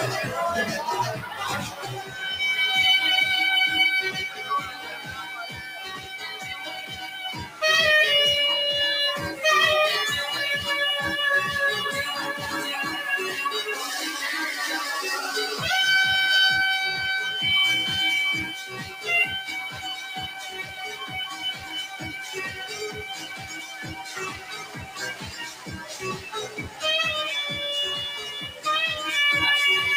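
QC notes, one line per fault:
Throughout: noise suppressor applied to music or sounds. A speech-oriented suppressor stayed active on material it was never designed for, treating sustained tones, ambience and reverberant decay as noise to be attenuated. Its gain rides up and down by roughly 15 dB as it repeatedly reclassifies the signal, so attacks pass fairly intact while held portions and tails are pulled down. The result is audible pumping and a thinned, unsteady body to the sound.
1.23–1.41 s, 1.70–1.85 s, 4.28–7.62 s, 18.45–19.06 s, 19.41–26.83 s, 28.11–28.65 s: sound cut by the noise suppressor. In each span the suppressor judged the sound to be noise and clamped it harder than its surroundings, by about 6 dB and 7 dB in the two brief dips near the start, about 9 dB through the long 4.28–7.62 s and 19.41–26.83 s stretches and at 18.45 s, and about 8 dB at 28.11 s. Sustained and decaying material sinks audibly or has its decay cut short.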